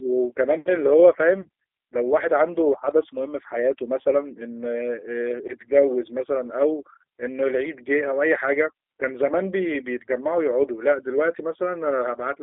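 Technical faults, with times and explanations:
Throughout, G.729 codec: the speech was encoded with a low-rate coder that rebuilds each short frame from a vocal tract filter, a pitch predictor and a few pulses. The result sounds like an 8 kbit/s G.729A path. The band runs only from about 300 Hz to 3.5 kHz, which makes the speech thin and boxy. The sparse pulse excitation gives it a plainly audible rough, synthetic edge.
1.41–1.48 s and 4.02–4.08 s, VoIP packet loss concealed by the speech codec: each gap sounds like a single lost packet covering about 30 ms of audio. The decoder filled the hole by repeating its last pitch and filter settings at falling gain. That stretches the sound into a brief buzzy tone or coloured noise that fades. Because every frame is predicted from the one before, the speech stays weak and smeared for a short while after each dropout.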